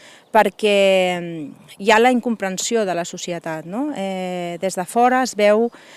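Nothing stood out on listening to this clip.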